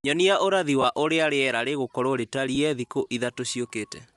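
Throughout the speech, a breathy, grainy edge in the upper band points to Bluetooth LC3 compression, likely at around 48 kbps, where missing treble is noise-filled rather than swirling. At 0.82 to 0.84 s and 2.55 to 2.57 s, lost LE Audio frames smear into brief noisy repeats, not hard silent dropouts, which fits two frames and then one 10 ms frame.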